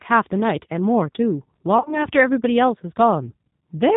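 From start to finish the speech carries the marks of the G.729 codec. A vocal-tract filter, a pitch predictor and a sparse set of pulses rebuild the voice at a rate that fits 8 kbit/s G.729A, and the loss of detail is plainly audible as a slightly rough, synthetic edge. On a spectrogram the energy stops flat at 4 kHz, with an empty band above, and the harmonics look smeared and less finely structured than in clean speech.

Between 1.78 and 2.06 s comes VoIP packet loss concealed by the speech codec. About 60 ms of audio went missing in gaps scattered over 80 ms, the longest a single 40 ms stretch. The decoder covered each hole by repeating its last pitch and filter at falling gain, so the voice turns briefly into a buzzy tone or coloured noise and grows thin. The damage persists until about 2.06 s because each rebuilt frame depends on the one before. In the waveform the envelope sags into a stretched, fading section, and the spectrogram shows the last sound drawn out and fading.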